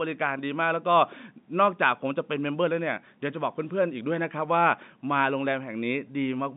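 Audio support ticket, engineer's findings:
No fault found; the speech comes through G.711 telephone coding, limited to the expected line band of about 150 Hz to 3.7 kHz.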